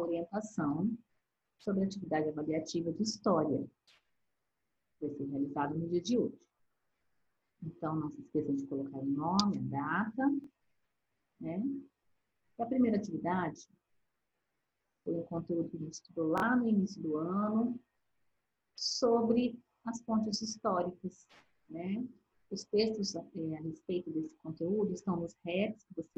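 Two bursts of Bluetooth stutter interrupt the audio, at 10.44 to 10.47 s and 16.38 to 16.42 s. Each time, data arrived late or not at all, and the receiver replayed its last buffer. About 23 ms was lost in the first burst and about 46 ms in the second, which fits one and then two missing packets. Playback then resumes further on, skipping what was lost. A waveform shows identical repeated slices, and a spectrogram shows brief, evenly spaced vertical striping.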